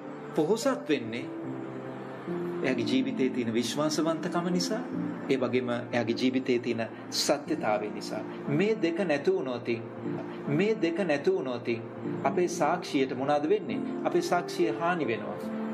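At 10.17 s a stream segment is repeated: the player queued the same two-second chunk again, so sound replays until 12.17 s, visibly duplicated on the spectrogram, with a blip at the jump.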